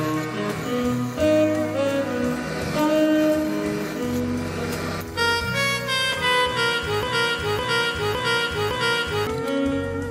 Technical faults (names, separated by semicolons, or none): broken-record loop